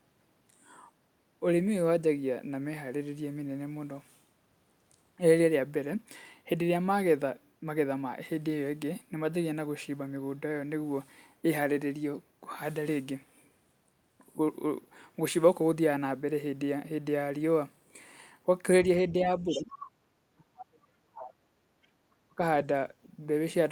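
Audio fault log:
18.98 to 19.72 s, speech suppressed in double talk: the talker dips by roughly 15 dB for around half a second, likely because the echo canceller couldn't separate them from the far end and turned everything down.
19.49 to 19.62 s and 19.8 to 19.88 s, other side's voice leaking through: two short scraps of a second voice sit roughly 15 dB under the talker, likely loudspeaker echo the canceller failed to remove from the mic.
20.35 to 21.49 s, speech suppressed in double talk: the biggest one, a drop of roughly 40 dB that chops about a second of the talker, likely the canceller clamping down during overlap.
21.87 to 22.0 s, background gated by the echo canceller: room sound dips by about 11 dB for roughly 150 ms while the loudspeaker plays, then comes back when the canceller releases.
22.28 to 22.41 s, speech suppressed in double talk: a brief dip of roughly 25 dB, likely the same overlap clamping.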